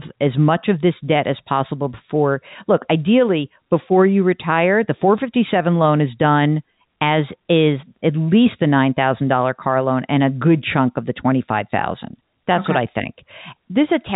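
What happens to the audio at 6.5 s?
Nothing goes wrong at 6.5 s: the speech carries straight through that moment intact, with only the steady narrow telephone-band sound of G.711 coding, which cuts everything above about 3.8 kHz.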